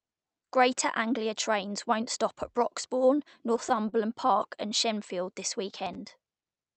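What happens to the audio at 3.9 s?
At 3.9 s the audio is near the end of a run of repeated stalls (stutter) lasting from 3.37 to 3.95 s. Packets arrived late or too slowly for playback, so the jitter buffer ran dry five times. Each time, the receiver stretched the last sound to cover the wait, about 66 ms in total, with the longest hold about 27 ms. Nothing is lost, but the speech drags and catches in small hitches.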